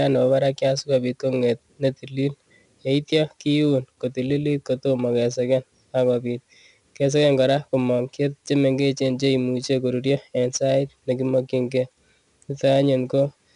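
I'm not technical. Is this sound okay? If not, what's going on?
No. From start to finish the speech carries a gritty, sandy hiss caused by 4-bit ADPCM compression. This format saves each moment of sound as a small guessed step from the last one, and the rough guesses leave grit that rises with loud syllables and sinks in quiet gaps. Ordinary background hiss stays steady through pauses, so that is how you can tell them apart. Nothing is heard above about 10.8 kHz either, so the sound is dulled.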